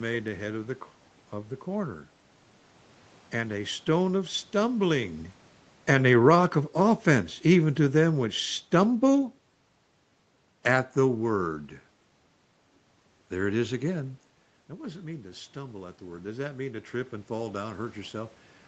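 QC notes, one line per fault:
5.77–9.43 s, automatic gain falling: the gain control reacts to a louder input and eases its gain down about 5 dB, so voice and room noise sink together.
14.69–18.41 s, automatic gain rising: after the input drops about 12 dB near 14.5 s, the gain control gradually adds about 4 dB, so voice and room noise swell together.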